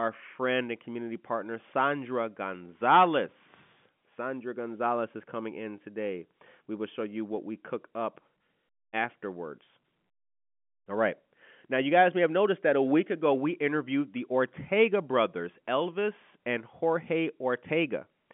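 Nothing goes wrong anywhere in this one; it's just ordinary telephone-band speech, with the usual narrow line band of roughly 150 Hz to 3.4 kHz and nothing happening that calls for comment.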